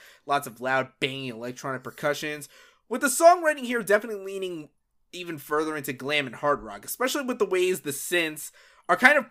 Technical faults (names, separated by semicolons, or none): none